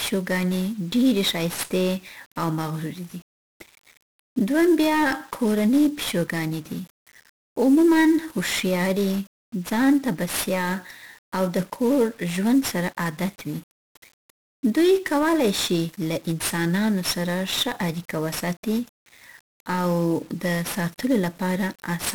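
From start to finish the speech carries heavy 1-bit DFPWM compression damage, consistent with a low-rate DFPWM stream around 48 kbps. Each sample only nudges an adaptive level up or down, so dense broadband quantisation noise rides on everything, leaving the speech fuzzy and crackly with its treble buried in hiss.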